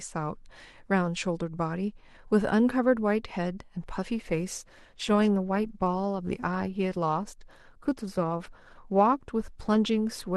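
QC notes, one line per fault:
4.14 to 10.36 s, adaptive stream at a lower bitrate. The speech drops abruptly in quality with no gap. Artefacts rise, which fits a switch from roughly 64 to 16 kbit/s Opus when the connection slowed.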